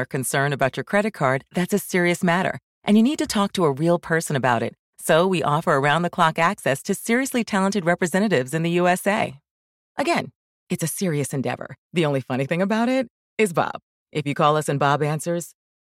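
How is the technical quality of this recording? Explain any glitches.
No technical glitches can be heard anywhere in the recording. The speech comes through without any interruptions, dropouts or artefacts in need of explanation.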